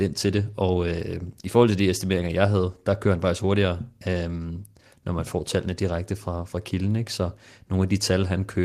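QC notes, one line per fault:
No faults heard anywhere on this speech recording; nothing to log.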